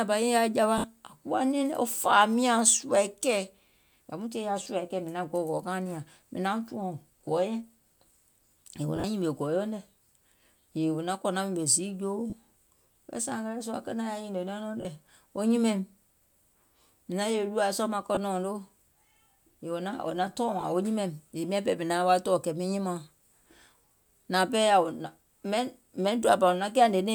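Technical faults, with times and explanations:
0.78–0.84 s, 4.63–4.66 s, 8.96–9.04 s, 12.30–12.33 s, 14.81–14.85 s, 18.15–18.17 s and 20.61–20.63 s: lost LE Audio frames. Stretches of 20 to 60 ms go missing; at 8.96 s the loss is spread over 80 ms, the longest run about 40 ms. The LC3 decoder conceals each gap by reusing the last spectrum with scrambled signs, so instead of a silent dropout you hear a brief hissy smear where the voice was. The gaps come in whole lost 10 ms frames.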